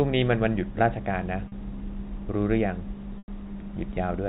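At 1.48 s, a 40 ms gap shows packet loss with pitch repetition. The receiver replays the last pitch period to cover the missing audio, so the speech briefly sounds held and buzzy. At 3.18 s, a longer 100 ms loss stretches that repeated period until it fades to silence, and the speech comes back with a short cross-fade at 3.28 s. Both gaps fit lost 20 ms packets, within band-limited telephone audio.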